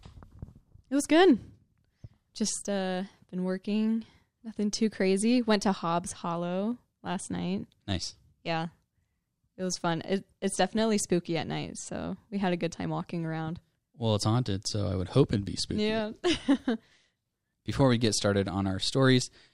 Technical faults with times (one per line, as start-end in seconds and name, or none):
17.80 DAB burbling